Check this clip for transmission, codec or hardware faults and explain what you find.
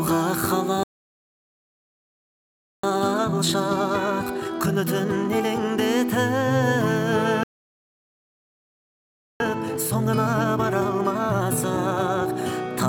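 Two faults recur in pairs: the audio twice drops out completely and then hurries to make up the lost time.

Playback stall, 0.83 to 2.83 s and again 7.43 to 9.40 s: the sound cuts off mid-flow and the output sits silent for about 2 seconds each time before resuming. Nothing fades out first; it simply stops. The likely cause is the player running out of buffered data, or its audio thread being blocked, so that it had nothing to send to the output until it recovered.

Time-compressed catch-up, 2.83 to 5.83 s and 9.40 to 12.40 s: immediately after each silence, the audio runs at 1.5 times normal speed for 3 seconds, rushed but still at its normal pitch. The player is working off the backlog that built up during the stall by cutting out small pieces and cross-fading across the joins. That keeps the pitch unchanged.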